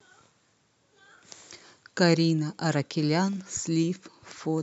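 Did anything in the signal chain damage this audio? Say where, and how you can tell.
Yes. The damage is at the buffer between two devices. From 0.51 to 4.58 s, a click recurs every 0.68 s, about seven times. These are clock drift buffer slips. The two clocks likely differ by a few hundred ppm, so each slip drops or repeats a few samples.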